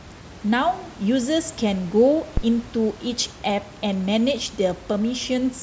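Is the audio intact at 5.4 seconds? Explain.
Yes, the audio is intact at 5.4 seconds, with only the room's own background noise, about 20 dB below the speech, audible beneath it.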